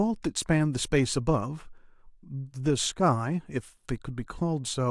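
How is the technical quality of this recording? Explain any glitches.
No glitches turn up anywhere in the recording: the speech signal runs continuously and evenly, with nothing interrupting or disturbing it.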